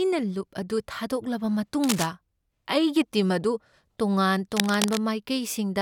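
At 1.83 s there's a burst of cable scratch noise lasting about a quarter of a second, then another from 4.52 to 4.98 s, nearly half a second. Both sit only a few dB under the speech, so they really poke through as a ragged scratching, rustling texture. Likely cause: a worn cable or connector being moved, its contact resistance jumping around and spraying uneven noise into the signal.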